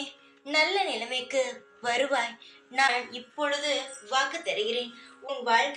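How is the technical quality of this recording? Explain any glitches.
Two short glitches mar the recording. At 2.86–2.89 s and 5.27–5.30 s the sound jumps ahead with a brief chirp, noise burst or short hole about 30 ms long, roughly one 26.1 ms frame. The likely cause is a broken MP3 bit reservoir: after frames went missing, the next frame borrowed bits from the wrong data. On the waveform each shows an abrupt discontinuity.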